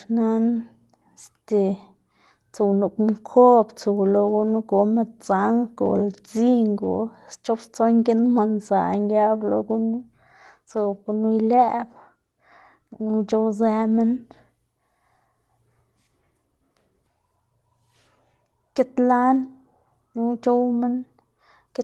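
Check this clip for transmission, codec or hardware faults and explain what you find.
No faults can be heard in this speech recording; it has the normal character of a WebRTC call path, with the high end stopping near 12 kHz, which fits Opus running at around 24 kbps.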